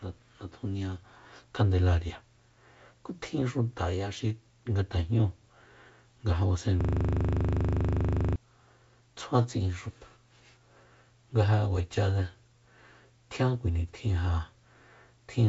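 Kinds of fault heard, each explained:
System hang loop: the system froze and one 40 ms slice replayed exactly 39 times, 6.81 to 8.36 s, buzzing at 25 Hz; unlike a dropout, the sound repeats instead of going silent.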